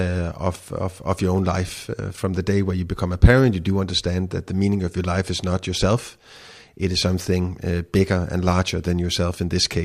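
A short speech recording with no technical faults to report. Nothing in the audio points to a problem in how it was captured, processed or delivered.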